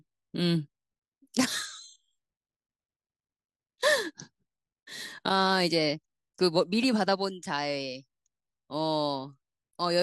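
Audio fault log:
No faults detected anywhere in the speech recording.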